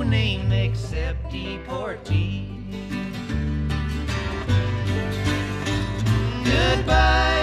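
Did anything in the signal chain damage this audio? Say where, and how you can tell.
Yes. The damage sits at the sample-format conversion stage, where crude rate conversion was applied. For the whole clip, a gritty, inharmonic fizz rides on the louder and brighter passages, roughly 35 dB below the signal. It tracks level and treble and is made of shifted, inharmonic copies of the content. The pattern fits linear interpolation from 32 kHz up to 44.1 kHz with no anti-imaging filter. Each output sample is estimated from neighbours on a repeating grid, leaving spurious tones.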